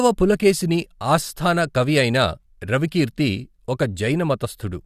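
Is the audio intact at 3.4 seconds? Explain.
Yes, the speech at 3.4 seconds plays through cleanly, with no audible fault at that moment.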